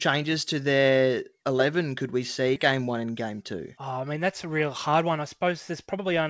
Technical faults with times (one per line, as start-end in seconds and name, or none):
2.56 skip ahead
2.72-6.22 jitter buffer speed-up